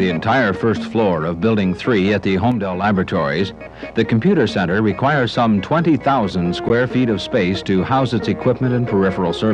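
The audio has two faults. A one channel drops out fault runs from 2.52 to 2.84 s: the level falls abruptly by about 6 dB and then recovers, likely because one stereo channel vanished before the mono mix. A gap at a join of encoded pieces occurs at 6.69 s: a break of about 15 ms, left by untrimmed encoder delay and padding, interrupts the sound, which then resumes where it stopped.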